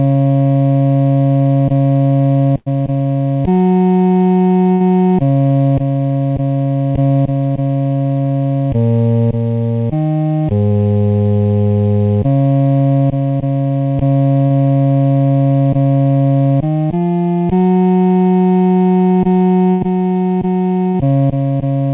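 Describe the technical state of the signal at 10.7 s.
At 10.7 s there is a short concealed packet loss, from 10.68 to 10.72 s. About 20 ms of audio never arrived in time. The receiver filled the gap by extending the preceding sound and then blending back. It is heard as a brief smear or wobble, and a short sound could drop out there.

Channel delay (comb filtering) is also present at this moment. One channel lags the other by under half a millisecond, and the mono sum cancels at evenly spaced frequencies. The first notch falls around 1.5 kHz, which gives a hollow, phasey colour.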